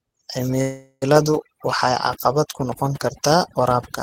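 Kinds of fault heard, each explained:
overdone noise removal: A noise reduction stage set far too strong pushes frequency bands down whenever they sit near its noise estimate, taking quiet parts of the speech with them. Throughout the clip the background drops and breaks up into twinkling specks.
call audio freeze: Packets were likely held up in transit, draining the jitter buffer, so the receiver stretched the last sound into a fading fill. From 0.61 to 1.04 s this filler plays before a brief silence, then speech resumes where it stopped, about 0.4 s late.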